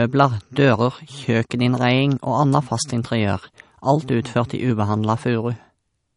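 Throughout, the speech carries plainly audible MP3 compression, likely from a low bitrate near 40 kbps: treble stops at 10.5 kHz, with a watery, swirling texture.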